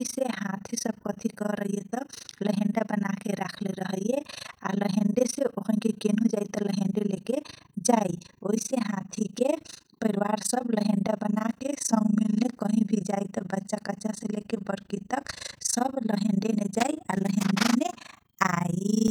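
Throughout the speech, overlap-add ripple from frames rejoined with a mismatched overlap swings the level by about 60 dB around 30 times a second, giving a rough flutter.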